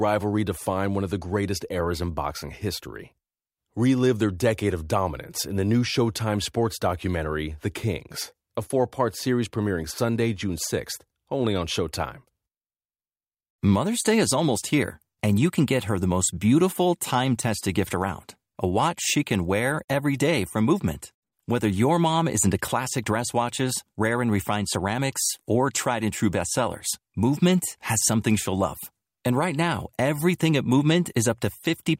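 Nothing in the recording stands out as a technical fault at any point, so there's nothing to flag here.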